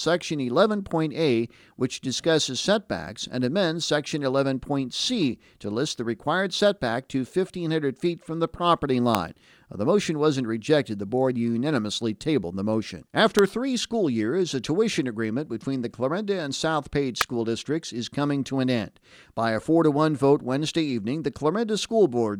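At 9.15 s, just after "feet from the property", a sharp snap cuts through the speech, peaking at about −5 dBFS; two more follow at 13.39 s, between "unanimously tabled the motion" and "three school years a", and at 17.21 s, before "districts is coming to", both stronger than the first. These are electrical switching spikes, likely from a nearby switch or discharge arcing into the line. Each shows as a sharp needle on the waveform and a thin full-height vertical stripe on the spectrogram.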